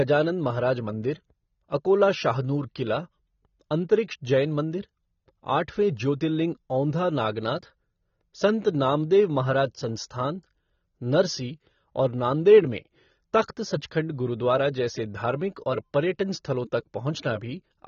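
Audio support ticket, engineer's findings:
AAC compression, entire clip. Speech dull and smeared, with warbly, fizzy sibilants. Nothing above 6.9 kHz. On a spectrogram, a flat ceiling at 6.9 kHz. Waveform unremarkable. Likely cause: an AAC-LC encode at a low rate, consistent with about 24 kbps. Coarse quantisation plus a lowered cut-off strip the top band and thin out the rest.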